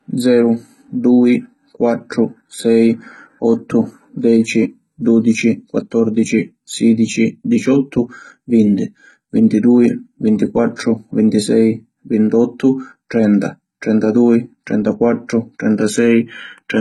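From start to finish the speech carries heavy HE-AAC compression damage, most likely from a low-bitrate HE-AAC encode, with the sound pointing to roughly 16 kbps. The treble is still there but has been rebuilt, copied up from lower bands, and nothing survives above about 11.9 kHz. S sounds come out gritty and lispy with a metallic sheen. Plain low-pass band-limiting would sound dull, but this stays bright while the top harmonics fail to line up with those below.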